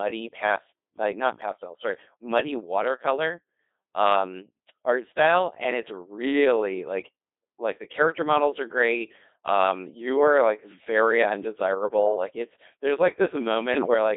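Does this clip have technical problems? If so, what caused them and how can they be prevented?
Yes, two. The whole clip went through the Codec 2 vocoder, and the damage is heavy: the speech comes out robotic and buzzy, squeezed into roughly 250 Hz to 3.7 kHz, which fits the 2.4 kbit/s mode. The decoder rebuilds the voice from sine waves using pitch, voicing, energy and envelope, so the original waveform is gone. To prevent it, use a higher-rate waveform codec wherever the link allows.

Then from 13.72 to 13.94 s there are bit errors on digital voice radio, where the synthetic voice jumps in pitch, level and tone colour. That's flipped bits, at an error rate of around five percent, hitting about eight vocoder frames, and each bad bit scrambles a whole frame's parameters. To prevent it, keep the radio well inside coverage or add stronger error protection.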